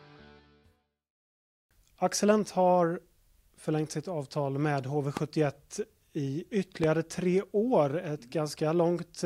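Two loud pops break into the audio. The first runs from 5.17 to 5.19 s, the second from 6.84 to 6.86 s. Each is a single sharp burst, roughly 15 dB above the surrounding sound. The sound carries on beneath both. The likely cause is a sudden voltage step or spike in the chain, perhaps a switch, a plug, static or a driver glitch. The circuits downstream shape that jolt into a brief thump.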